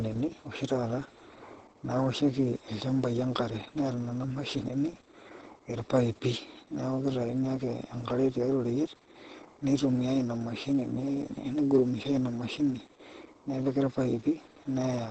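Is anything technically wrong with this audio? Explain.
Yes. Throughout, Opus voice compression: SILK cuts everything above 8.6 kHz and codes excitation coarsely, leaving the speech muffled, hoarse and slightly robotic, consistent with about 10 kbps.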